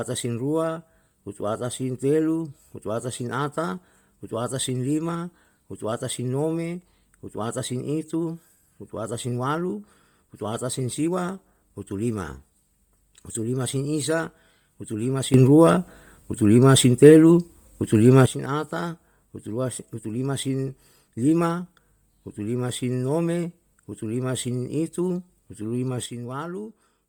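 Throughout, the speech carries heavy damage that most likely comes from Bluetooth LC3 compression, at a rate that fits about 32 kbps in 10 ms frames. Much of the upper spectrum is discarded and refilled with noise, giving the voice a breathy, grainy edge, with nothing above 20.2 kHz.

At 15.34 s, a sudden gain jump, probably a gain change applied without a ramp, lifts the level by about 12 dB in a single step. Voice and background noise rise together until 18.26 s. At 26.06 s, a second jump drops everything by about 7 dB through to the end.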